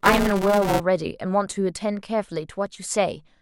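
From 0 to 0.8 s, buffer tearing: the writing program and the playback hardware have slipped out of step, so roughly a third of each 5 ms period holds audio from about one lap earlier, hard-joined on both sides. The speech carries a robotic 200 Hz buzz.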